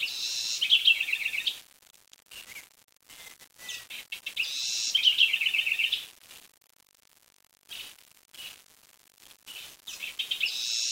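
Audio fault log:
Throughout: low bit depth without dither. Gritty grain that follows the signal sits roughly 20 dB below it, likely from rounding to about 6 bits with no dither. The waveform shows coarse stair steps; the spectrogram shows a noise floor that rises and falls with level.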